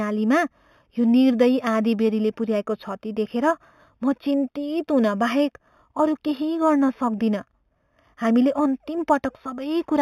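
Throughout, imaging from linear upsampling from 8 kHz to 48 kHz dulls the top and leaves a faint metallic shimmer on sibilants. On a spectrogram, a mirrored copy appears between 4 kHz and 8 kHz, about 30 dB down.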